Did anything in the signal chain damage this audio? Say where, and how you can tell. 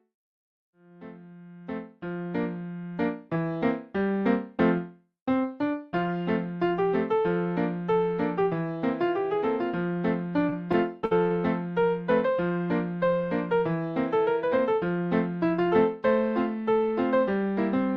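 Yes: repeated stalls (stutter) at the network jitter buffer, 10.49–11.32 s. Five underruns, the longest 58 ms, were bridged by stretching the preceding sound, so the audio drags and stutters.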